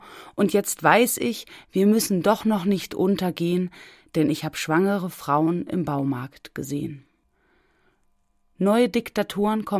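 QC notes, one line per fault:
Nothing to flag here; I listened all the way along and didn't catch a single technical problem.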